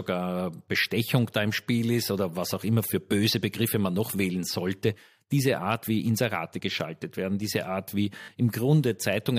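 At 8.22 s the speech stutters briefly, through to about 8.28 s. This is a repeated buffer. Fresh audio did not reach the playback device in time. The device filled the gap by playing its last block again, several times over. Each repeat is short, which fits a 20 ms buffer. The joins between copies are hard, so the stutter sounds like a quick buzzy rattle. Around 70 ms of real speech goes missing there.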